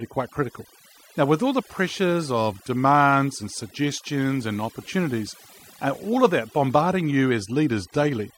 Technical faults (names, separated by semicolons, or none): overdone noise removal